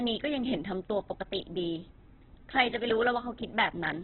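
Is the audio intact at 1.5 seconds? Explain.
No. Throughout the clip, speech is rough and grainy with nothing above 4.4 kHz, likely Opus compression at a very low bitrate: noise-filled bands rather than MP3's swirling spectral holes.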